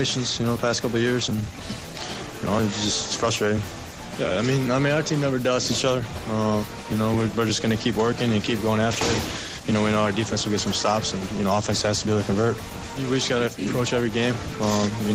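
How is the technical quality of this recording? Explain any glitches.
The recording carries a steady timing fault from start to finish. Two related glitches are present.

Clock drift between sender and receiver runs through the whole clip. The sending device's clock is fast, by roughly four percent. Audio therefore arrives slightly quicker than the receiver plays it out. Its jitter buffer keeps filling. The receiver has to respond continually. The result is a faint, persistent unsteadiness rather than one clear event.

Repeated timing corrections are heard from 0.17 s to 15.1 s. To keep the buffer from overflowing, the receiver keeps discarding short slices of audio. Playback averages about 104 percent of normal speed. Every edit removes material, never repeats it. The cuts are small and unevenly spaced.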